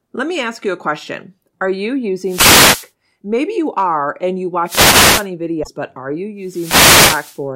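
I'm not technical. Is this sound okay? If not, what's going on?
No. Three times you'll hear a rushing swish of static: from 2.24 to 2.91 seconds, from 4.65 to 5.27 seconds just after "you are and you", and from 6.42 to 7.42 seconds right after "but are". These are wireless microphone noise hits. The radio link between the microphone and its receiver weakens for a moment as reflected signals cancel each other, and the receiver's own hiss rises to fill the gap.

There are also two brief chirps or blips, at 2.37 to 2.46 seconds, inside the first static burst, and at 5.61 to 5.68 seconds, just before "but are". These come from damaged data in a compressed stream. Part of the stored or transmitted file was corrupted, so the playback software misread that spot, leaving a short glitch.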